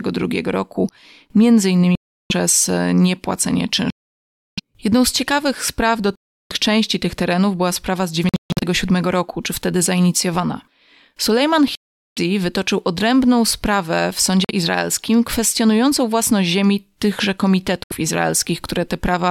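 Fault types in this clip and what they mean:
Bluetooth dropout: the speech cuts to dead silence seven times, the gaps running from about 50 ms up to roughly 0.7 s, one near 8.3 s breaking into a stutter of short holes, likely from packets reaching the headphones too late.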